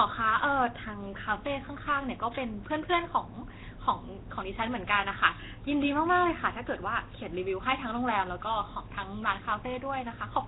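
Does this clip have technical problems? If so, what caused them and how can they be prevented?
Yes. Throughout the speech there is a rough, hissy halo and a smeared, underwater quality, with nothing audible above 3.9 kHz. This is likely Nellymoser compression, the old Flash microphone codec, working at a low rate that fits around 16 kbps. It spends a fixed small number of bits on each short block, so quieter bands receive no bits and are filled with noise, which produces the heavy hiss and blur. To prevent it, record or transmit with a modern codec such as Opus at an adequate bitrate instead of Nellymoser.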